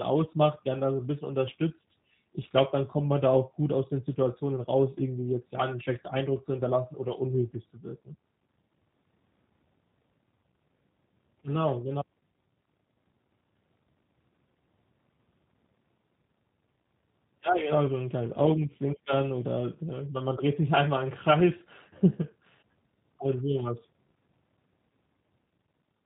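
From start to end the speech carries G.729 codec damage, plainly audible. The bandwidth stops at 4 kHz, and the voice is rebuilt from a vocal tract filter and sparse pulses, giving a rough, slightly synthetic texture that fits an 8 kbit/s G.729A encode.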